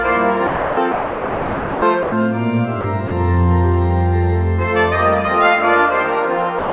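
At 0.47 to 0.77, 0.92 to 1.82, 2.03 to 2.12, 2.81 to 2.84, 3.08 to 3.11 and 6.59 s to the end, the sound gives way to flat, steady noise. This is likely sound dropped by the voice detector and replaced with comfort noise. On a spectrogram these stretches appear as uniform, structureless bands. On the waveform they are low, even fills where the signal should be. Above 4 kHz the spectrogram is empty throughout, which fits a narrowband G.711 call path.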